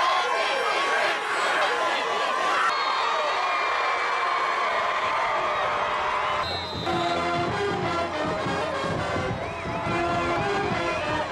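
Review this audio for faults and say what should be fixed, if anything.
The recording chain most likely works in fixed blocks of about 2 s and drops a piece of audio, roughly 300 ms, each time it closes one block and opens the next, leaving audio missing between chunks. The remaining audio is spliced together with no gap, so the sound jumps forward abruptly at 1.61, 3.36, 5.11, 6.86, 8.61 and 10.36 s, a regular skip every 1.75 s. To prevent this, double-buffer the capture so the next chunk starts recording before the previous one is closed and written out.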